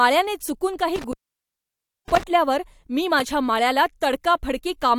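It's a speech clip with an intermittent contact fault: right after "चुकून काही", around 0.96 s, the sound drops out, with crackle at the edges, until about 2.23 s. The line stays open for roughly 0.95 s, which points to a loose cable or plug briefly losing connection.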